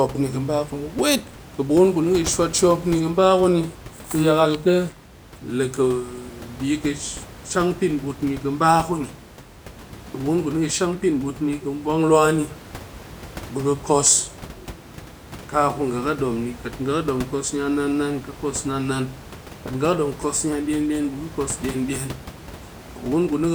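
No technical faults can be heard in this speech recording. The room's background noise sits about 17 dB below the speech and belongs to the recording itself rather than to any failure in the system.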